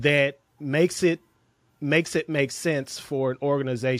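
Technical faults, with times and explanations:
No technical faults are audible; the speech signal comes through intact and steady over its whole duration.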